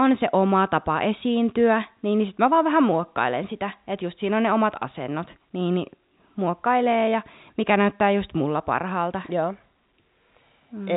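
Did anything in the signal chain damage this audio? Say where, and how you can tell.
No, nothing in the signal chain damaged this speech.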